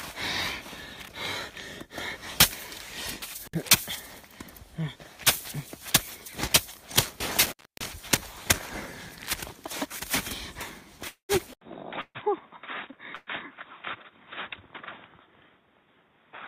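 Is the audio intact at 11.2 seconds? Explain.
No. A call audio freeze from 11.07 to 11.32 s, likely from delayed packets draining the jitter buffer, turns the last sound into a fading buzz and then silence. Unlike a dropout, nothing is lost: the audio resumes where it stopped, about 215 ms late.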